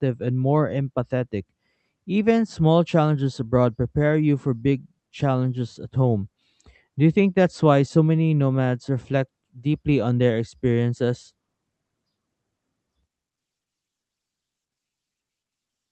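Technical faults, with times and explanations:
No technical faults can be heard in this speech, so there are no times or explanations to give.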